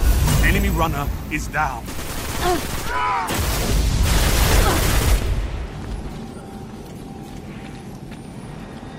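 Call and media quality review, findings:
Loud pop, 5.22–5.24 s. Single sharp pop peaking roughly 5 dB above the program, audio continuing underneath. Likely a voltage step from a plug, switch, static or driver glitch, shaped by downstream circuitry into a brief transient.

Call bitrate drop, 6.04–7.39 s. Audio turns coarse and muffled, high end cut away, worst for about 1.25 s before recovering. Sound consistent with the encoder falling from around 128 kbps to about 21 kbps after a bandwidth estimate collapse. Opus quantises coarsely and narrows bandwidth at that rate.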